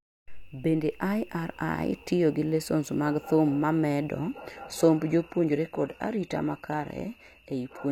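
At 4.09 s the speech switches abruptly, without a gap, to an adaptive stream at a lower bitrate. Treble above 14.9 kHz vanishes, consistent with roughly 20 kbit/s HE-AAC.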